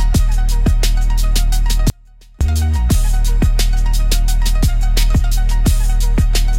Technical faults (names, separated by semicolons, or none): audio dropout to a faint residue